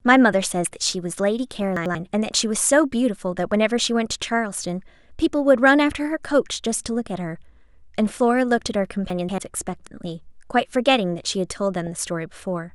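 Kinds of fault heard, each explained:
DAB burbling: heard at 1.59 to 1.62 s, 3.79 to 3.82 s, 6.13 s, 10.05 to 10.08 s and 11.87 s as brief noise blips laid over the speech. Weak digital radio reception lets a small fraction of a percent of bits slip past error correction into the MP2 stream, so corrupted samples put short noise blips in isolated frequency bands and corrupted scale factors make bands leap in level for up to a frame before the decoder recovers.
Chunks out of order: at 1.77 to 1.95 s and again at 9.10 to 9.38 s the speech briefly jumbles. A block of about 93 ms was delivered or written late, so it plays after material that should follow it, one block late in the first case and two blocks late in the second. No audio goes missing, but the misplaced block creates three abrupt splices each time.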